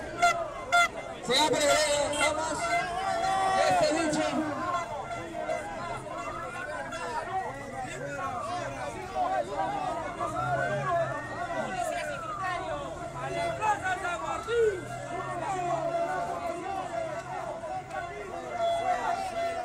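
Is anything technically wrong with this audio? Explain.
Yes. A truncating block size mismatch runs through the entire clip. One stage writes blocks slightly longer than the next stage reads, so the end of each block is discarded. Each cut adds a discontinuity, heard as a steady 100 Hz buzz. The playback rate still measures 1.0x, so very little audio is lost per block.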